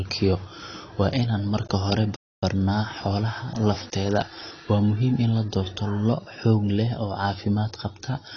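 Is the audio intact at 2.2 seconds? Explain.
No. A playback stall cuts the sound from 2.16 to 2.43 s, just after "inaan marka hore". For about 0.27 s the output goes silent, likely because the player ran short of data or its thread was blocked, and then resumes. On a waveform this shows as a flat gap, and on a spectrogram as a blank vertical band.

The same moment also carries AAC compression damage that runs through the whole clip. The sound is dull and smeared with a fizzy, warbling edge on sibilants. A spectrogram shows a hard ceiling with nothing above 6.6 kHz, which fits likely AAC-LC coding at around 28 kbps.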